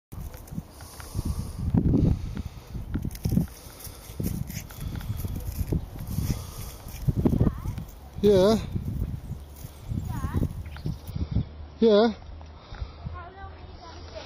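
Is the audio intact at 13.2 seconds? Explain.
No. At 13.2 seconds the audio is inside a stretch of adaptive stream at a lower bitrate, running from 11.1 s to the end. The connection slowed, so playback switched without a gap to a thinner encoding, which fits a drop from 128 to about 23 kbit/s MP3. Treble above 5.8 kHz vanishes and the sound turns dull and swirly. A spectrogram shows an abrupt flat ceiling at 5.8 kHz from 11.1 s, while the waveform continues unbroken.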